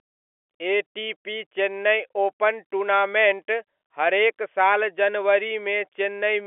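No technical faults are audible in this speech recording.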